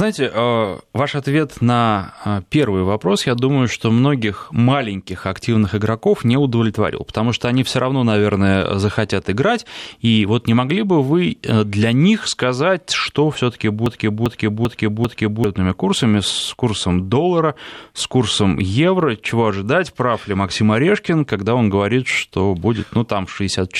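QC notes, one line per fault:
13.86 to 15.44 s, broken-record loop: a 0.39 s chunk repeats four times back to back, likely a stalled stream resending its last fragment, before "курсами с курсом доллара".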